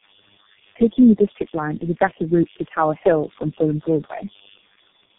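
A mains buzz runs from start to finish. It sits roughly 25 dB below the speech. Its base is 50 Hz. Sharp switching spikes, twice per mains cycle, add a dense stack of harmonics above that. The result is a steady, raspy buzz rather than a smooth hum. It does not change with the speech. It fills the gaps between phrases as much as the phrases themselves.

Tandem speech coding also affects the whole clip. The speech sounds rough, muffled and warbly. Nothing is present above 3.7 kHz. The damage is heavier than one speech codec would cause. That points to several codecs in a row, perhaps four, each re-coding the previous one's already degraded output. The last stage sounds like a low-rate coder such as G.723.1. Each pass adds its own smearing, so the errors pile up.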